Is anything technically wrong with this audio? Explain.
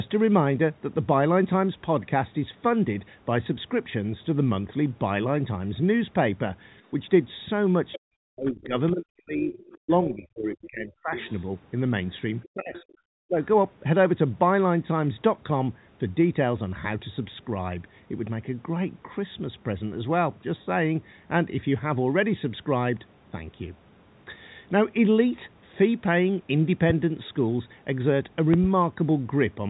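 Yes, there are three distinct problems, all clustered in the middle of the clip except one near the end.

First, other side's voice leaking through: short scraps of a second voice turn up at 7.92 to 7.99, 9.43 to 9.78, 11.16 to 11.41 and 12.43 to 12.92 s. They sit quiet, somewhere around 15 to 25 dB under the main talker. The likely cause is the far end playing out of this device's loudspeaker, with the echo canceller failing to scrub all of it from the mic, so fragments slip through.

Second, speech suppressed in double talk: from 7.98 to 11.18 s the talker keeps ducking away, dropping by as much as roughly 40 dB, then again briefly at 12.47 to 12.89 s and 13.27 to 13.39 s, the last one a shallower dip of roughly 30 dB. The first two line up with the leaked far-end bits. Most likely, with both sides talking at once, the canceller couldn't tell local speech from echo and just turned everything down, so the voice sounds gated and chopped.

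Third, a loud pop near the end: two quick pops between 28.54 and 28.67 s, peaking roughly 15 dB above the speech, which carries on underneath. That's likely a sudden voltage step or spike, from a connector, switch, static or driver hiccup, getting into the chain. The downstream circuitry shapes it into a sharp double click that jumps out well above the level of the talk.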